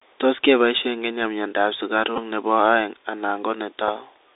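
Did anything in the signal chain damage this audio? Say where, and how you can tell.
Yes. At the codec stage, the whole clip is squeezed into a narrow telephone band of about 300 Hz to 3.7 kHz. Sibilants turn scratchy and a grainy hiss sits under the speech. This is the Bluetooth CVSD headset codec. It fits a 64 kbps one-bit stream whose adaptive up/down steps can't keep pace with loud high-frequency detail.

On the wireless link, a short buzz runs from 2.16 to 2.19 s, and a single small tick comes at 3.88 s. This is a Bluetooth headset packet repeated. The chip re-decoded the previous packet in place of lost ones, and repeating every 3.75 ms gives a buzz near 267 Hz. The buzz fits about four lost packets; the tick fits one.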